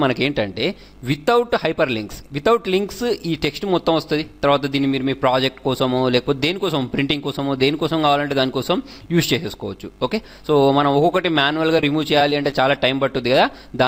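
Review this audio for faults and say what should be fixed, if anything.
Short concealed packet loss occurs twice in quick succession. At 11.77 s about 10 ms of audio never reached the decoder in time, and it patched 6 ms of the hole. At 11.81 to 11.83 s another 10 ms went missing, with 13 ms patched. Each time the receiver extended the preceding sound, pitched or noise-like depending on what came before, then blended back into the real signal, leaving a brief smear where a short detail may vanish.

Repeated packet loss (robotic sound) follows from 12.19 to 12.52 s. Packets failed to arrive four times within this third of a second, about 40 ms lost in all, the longest single gap 13 ms. Each gap was filled by continuing the last sound, and about 13 percent of the stretch is concealed, giving a choppy texture with pieces missing as one patch closely follows another.

Both faults are best prevented by steadying the network path and adding forward error correction or a deeper jitter buffer, so late packets are recovered instead of concealed.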